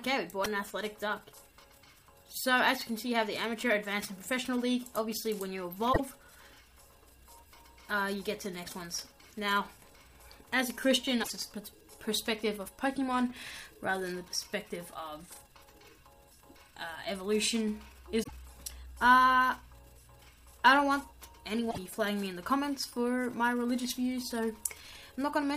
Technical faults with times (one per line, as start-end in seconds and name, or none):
0.44 damaged data in a compressed stream
5.89-6.00 damaged data in a compressed stream
11.19-11.30 damaged data in a compressed stream
18.20-18.31 damaged data in a compressed stream
21.67-21.78 damaged data in a compressed stream